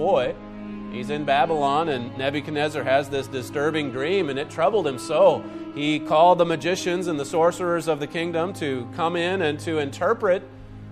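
Nothing technically wrong turns up anywhere in this audio, so there are no faults to point to and no times or causes to give.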